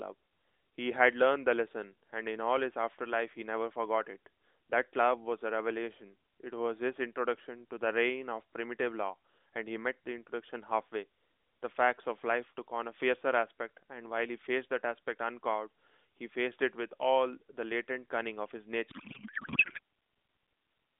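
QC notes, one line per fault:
18.90–19.79 s, codec payload misread: the speech collapses into garbled warble and noise. Octet-aligned AMR frames were likely decoded as bandwidth-efficient, so every field lands misplaced.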